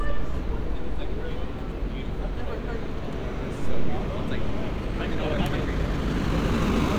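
From 4.74 s to the end, the sound suddenly rushes ahead, hurried, yet its pitch stays put. This is a time-stretched section running about 1.54 times faster, likely from software squeezing the audio by dropping short slices to keep pitch.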